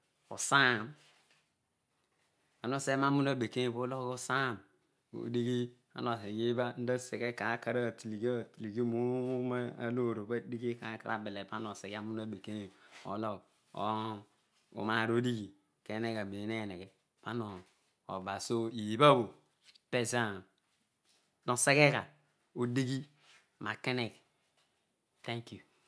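Speech recording, and nothing technically wrong with it can be heard at any point.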